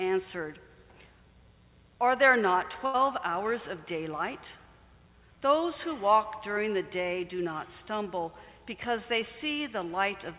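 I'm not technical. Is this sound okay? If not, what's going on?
No. At about 2.86 seconds there's a burst of packet loss: a short run of the data carrying the sound went missing on its way through the call. For roughly 80 milliseconds the receiving end had nothing to play, so it stretched the last bit of sound it had and let it fade, which you hear as a brief held buzz or hiss. Then the sound jumps ahead to about 2.96 seconds, and that sliver in between is simply gone. The slightly muffled tone throughout comes from the phone-style call line, which carries nothing above about 4 kHz.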